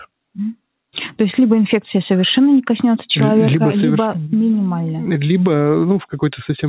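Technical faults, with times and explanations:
No technical faults can be heard in this clip. It has passed through a WebRTC call path, and nothing reaches above 4 kHz, which fits a narrowband G.711 mu-law codec at 64 kbps.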